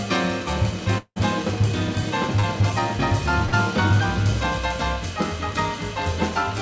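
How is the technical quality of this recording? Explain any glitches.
The recording carries three network glitches, all within the first four seconds. It passed through a wideband call codec: nothing above 8 kHz is present, which fits G.722 at around 64 kbps.

From 0.98 to 1.18 s there is what sounds like a long network dropout, likely caused by a stall in packet delivery. For about 180 ms no fresh audio reached the receiver, so it kept extending the last sound for roughly 179 ms. That synthetic continuation fades into about 50 ms of near silence before real audio returns further along, with the missing stretch simply gone.

At 2.40 to 2.45 s there is a short concealed packet loss. About 40 ms of data failed to reach the decoder in time, and the receiver bridged the hole with roughly 31 ms of audio extrapolated from what came just before, then blended back into the real signal. The result is a brief smear or wobble rather than an outright gap.

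From 3.46 to 3.54 s a burst of packet loss removed about 60 ms of audio in a row. The receiver again continued the preceding sound for around 61 ms, lowering its level as the gap went on, so the sound briefly turns into a held, fading buzz or hiss. Playback then picks up further on, skipping the material that was lost.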